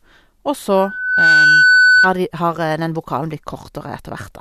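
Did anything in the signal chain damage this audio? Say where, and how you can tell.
Yes. From 0.77 s to 2.18 s a 1.5 kHz tone swells over roughly half a second to about 10 dB above the speech. This is loudspeaker feedback squeal in the acoustic path: the microphone picks up its own loudspeaker, and at 1.5 kHz the loop gain exceeds one.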